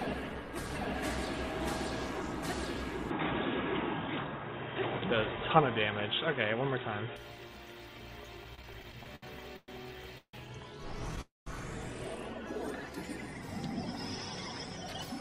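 From 3.10 to 7.16 s the sound turns dull and boxy, with a level about 5 dB different and a new hiss sitting well below the signal, then clears again. This is likely an input switched to a poorer device, a narrower-band microphone or headset call profile.

Between 8.37 and 9.70 s the audio drags and stutters through eleven brief holds, the longest 116 ms, together about 307 ms. These repeated stalls (stutter) come from packets arriving late, each gap bridged by stretching the last sound, with nothing lost.

At 10.18 s the sound hangs in a fading buzz and then 70 ms of silence, 154 ms in all, and at 11.21 s a longer hold of 253 ms, including 170 ms of silence. Both are call audio freezes: delayed packets likely emptied the jitter buffer, and playback resumed where it stopped.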